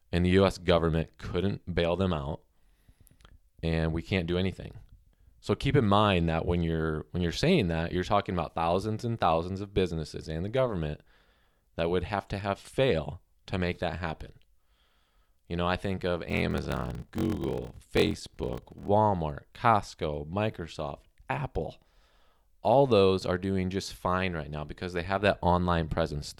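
A block size mismatch (padded) runs from 16.28 to 18.90 s in this speech recording. Each block read is topped up with silence, producing a 43.1 Hz buzz, consistent with 1024-sample blocks, and slowing the speech to 0.861 times normal speed with its timbre unchanged.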